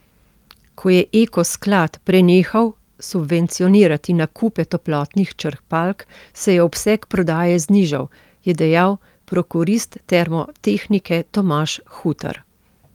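No technical faults can be heard anywhere in the speech recording, and the signal holds steady throughout with nothing in it to flag.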